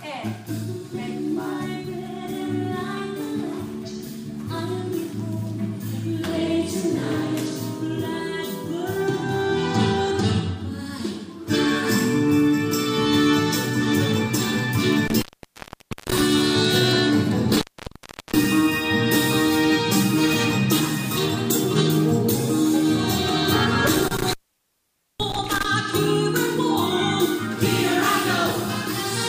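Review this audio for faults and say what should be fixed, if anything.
A loose cable or plug intermittently losing contact opens the signal line three times, at 15.08–16.21 s, 17.51–18.44 s and 23.87–25.65 s. Each time, the sound cuts out for about 0.85 s, 0.72 s and 0.86 s, with crackle at the break edges and faint hiss during each gap. Reseating or replacing the faulty connector and securing the cable so it cannot flex at the plug should prevent these dropouts.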